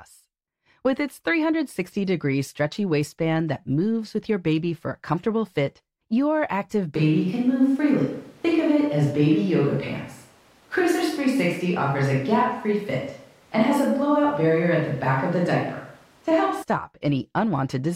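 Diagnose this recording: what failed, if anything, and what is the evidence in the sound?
Switch to a distant microphone at capture, 6.95 to 16.63 s: speech abruptly turns roomy and bass-light, likely the close mic dropping out for a farther one.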